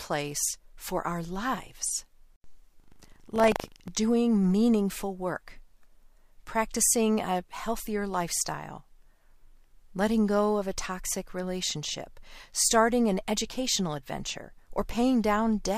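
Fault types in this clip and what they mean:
Buffer tearing: the program filling the playback ring buffer and the hardware reading it out have slipped against each other, so their positions cross inside every 40 ms period. A small slice of each period holds stale audio from roughly a tenth of a second earlier, spliced in with hard joins on both sides. From 2.76 to 3.89 s, just before "doing meaningful work", the speech carries a steady 25 Hz robotic rattle.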